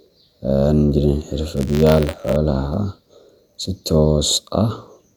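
From 1.56 to 2.37 s the program filling the playback ring buffer and the hardware draining it slip out of step, so their positions cross inside every period. This is buffer tearing. Each period then carries a small sliver of speech from roughly 20 ms earlier, with hard joins on either side. The result is a steady robotic buzz at about 93.8 Hz riding on the speech, which fits a 512-sample buffer.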